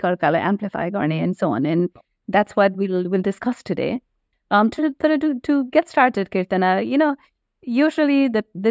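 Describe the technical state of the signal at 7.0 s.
At 7.0 s the speech carries channel delay (comb filtering), present throughout: one channel lags by only a few samples, under a tenth of a millisecond, so mono summing cancels near 7 kHz. A spectrogram shows a steady dark notch band there, below the call band's 8 kHz ceiling, and the speech sounds hollow or phasey.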